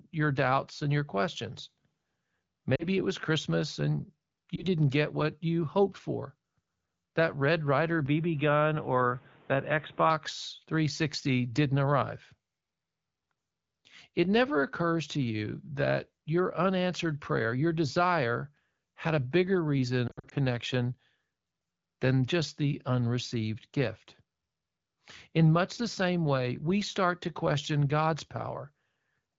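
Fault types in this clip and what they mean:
Lost AMR speech frames: Radio errors corrupted a few frames, so the decoder papered over them by repeating the last good pitch and vocal tract settings at falling gain. Around 2.75 to 2.87 s there's a short warbly dip, about 40 ms of concealed audio, and at 4.56 s a quicker blip about 20 ms long. The rough patch is 20.07 to 20.34 s, where about 140 ms of gaps are scattered over 240 ms, the longest stretch about 60 ms, giving a smeared, fading stutter before the clear wideband sound returns.
Input switched to a poorer device: From 8.06 to 10.10 s the speech suddenly goes dull and boxy, with nothing above 3.8 kHz, then opens back up. There's no silence at the switch and the level stays about the same, but a faint new background noise sits well below the speech while the narrow sound lasts. That points to the input likely hopping to another microphone or a headset's call profile for those two seconds, then switching back.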